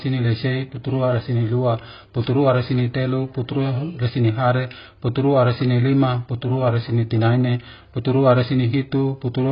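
Speech, with heavy AAC compression damage running through the whole clip. Nothing survives above about 5.1 kHz, so the sound is dull and band-limited, and sibilants and sustained vowels have a smeared, warbling, fizzy texture. The likely cause is AAC-LC encoding at a very low bitrate, which fits roughly 16 kbps. At that rate the encoder lowers its cut-off and quantises the remaining frequency lines coarsely, leaving gaps that smear each frame.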